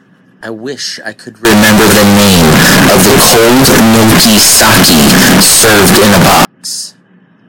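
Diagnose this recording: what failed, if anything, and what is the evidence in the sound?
The sample-format conversion stage failed. Right after "I wish I could", from 1.45 s to 6.45 s, the speech turns into a blaring, nearly square buzz sitting at an almost fixed, high level, with the background noise as loud as the talker. The pitch stays followable. This is likely 32-bit float data read as 32-bit integers, so the sign and exponent bits set the level. Ordinary clipping would flatten only the peaks and leave quiet passages quiet.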